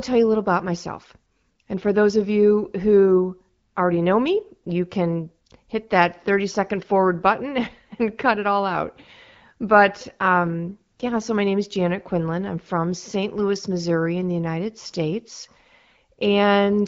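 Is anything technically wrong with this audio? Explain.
Yes. From 10.05 to 11.22 s, just before "my name is", there is an AMR rate drop. The link weakened and the codec shifted bits from speech to error protection. The speech turns rougher and more synthetic, with no gap or band change, which fits a step from AMR-WB's 12.65 kbit/s down to 8.85 kbit/s.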